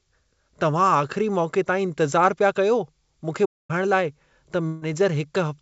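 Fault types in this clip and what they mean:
Playback stall: From 3.45 to 3.71 s the sound simply stops for about a quarter of a second, likely because the player ran short of data or its thread was held up. The waveform flatlines and the spectrogram shows a blank vertical gap.
Burst of packet loss: Around 4.67 to 4.85 s roughly 150 ms of audio never arrived, and the receiver stretched the last sound to cover it. On the spectrogram this appears as smeared, fading horizontal streaks, followed by an abrupt jump where later audio resumes.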